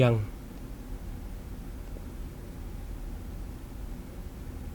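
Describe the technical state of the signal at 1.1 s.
At 1.1 s the speech signal is intact, with no audible technical fault at that moment.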